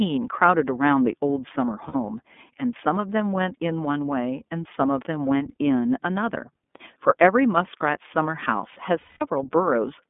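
Speech heard through the iLBC codec, squeezed into a narrow telephone band of roughly 200 Hz to 3.5 kHz. The coding damage is plainly audible: a rough, slightly synthetic edge on the voice. That texture fits iLBC's 13.33 kbps mode with 30 ms frames. What sets this apart from ordinary G.711 telephone audio, which shares the band limit, is that grainy, synthetic excitation rather than a clean but muffled voice. Two bursts of lost iLBC frames break in, at 1.88–1.96 s and at 8.99–9.22 s. The first gap is short enough to fit two lost frames. The second is longer, fitting about seven frames, and can be heard fading. In both, the decoder repeats the last pitch cycle mixed with noise, so the gap sounds like a held, breathy vowel rather than silence or a click. Unlike concealment in codecs that carry state from frame to frame, the voice snaps back right after each gap, with no smeared recovery.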